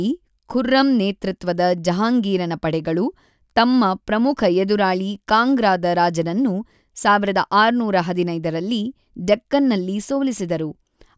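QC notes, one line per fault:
Nothing stood out on listening to the speech.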